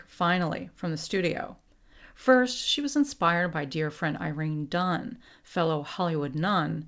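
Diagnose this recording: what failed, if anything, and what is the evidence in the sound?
Nothing failed; no faults heard.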